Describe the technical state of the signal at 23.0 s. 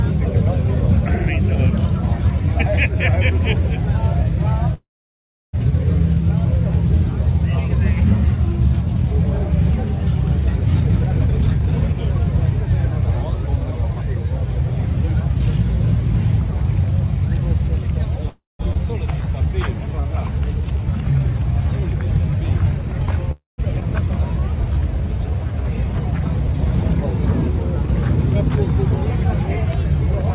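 At 23.0 s the audio sits inside a jitter buffer slow-down running from 19.19 to 26.48 s. The receiver repeated single pitch periods and pause fragments to stretch the audio by 260 ms, playing it at 97% speed, so sounds drag slightly at unchanged pitch, unlike a clock or sample-rate error, which would lower the pitch too.

Nested within it, from 22.78 to 23.17 s, is a jitter buffer speed-up. Here the receiver cut short pitch-period pieces, removing roughly a fifth of a second to shed excess delay, so this short stretch plays at 151% speed. It sounds briefly hurried but keeps its pitch, which separates it from a dropout or skip, where whole chunks vanish with an audible jump.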